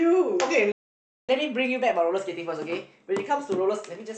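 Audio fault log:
0.72–1.29 s: playback stall. Speech cuts to silence for about 0.57 s mid-flow, likely because the player ran out of buffered data or its thread blocked.
1.29–4.17 s: catch-up at higher speed. After resuming, speech plays at 1.1x, pitch raised about one and a half semitones, as the player resamples to recover lost time.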